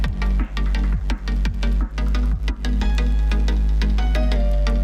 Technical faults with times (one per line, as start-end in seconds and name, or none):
1.93-4.36 drift correction step